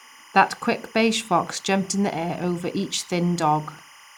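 Timecode bleed runs throughout: 25-frame linear timecode leaking from an adjacent track chirps between tones near 1 and 2 kHz, roughly 25 dB beneath the speech.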